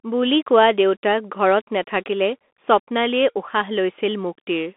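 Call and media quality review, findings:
Bluetooth CVSD headset codec, throughout. Speech band-limited to roughly 250 Hz to 3.5 kHz, nothing above 4 kHz. Granular hiss under speech, scratchy sibilants, loud high content distorting where the adaptive one-bit delta step can't keep up. Fits a 64 kbps headset link.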